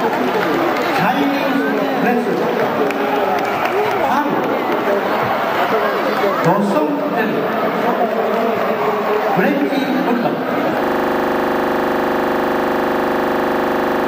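At 10.84 s a system hang loop begins and runs to the end. The system froze while hardware replayed one 40 ms buffer, giving a steady 25 Hz buzz.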